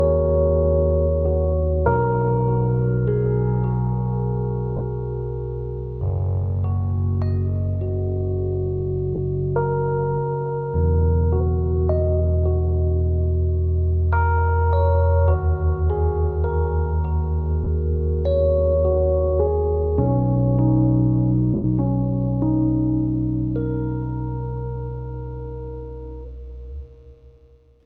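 In this recording of everyday sounds, four brief gaps come through as short, grainy smears instead of clean audio: 40 ms at 4.77 s, 30 ms at 9.15 s and 17.64 s, and a longer 100 ms one at 21.54 s that sinks toward silence. These are lost LE Audio frames. The LC3 decoder filled each gap by replaying the last spectrum with scrambled phase, then faded it, which fits runs of 10 ms frames going missing over the Bluetooth link.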